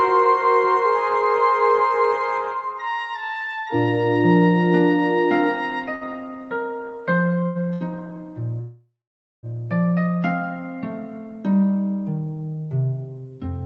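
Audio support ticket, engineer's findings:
Short stall from a late packet at 5.95 to 6.04 s, 7.46 to 7.58 s and 7.73 to 7.84 s. Sound held for 56, 92 and 75 ms with a slight buzz or dip. Jitter buffer ran dry, receiver stretched the last audio, nothing lost.

Call audio freeze at 8.61 to 9.46 s. Buzz or hiss fading to about 0.5 s of silence, then audio resumes where it stopped, 824 ms late. Likely packets held in transit, jitter buffer emptied.

Call path audible as Opus-style coding with top end cut at 8 kHz.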